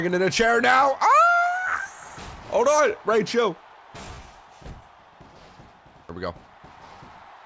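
No technical faults are audible.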